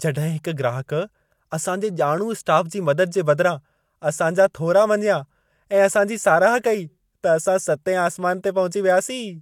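Nothing goes wrong anywhere in this speech recording, so there's no technical fault to point to.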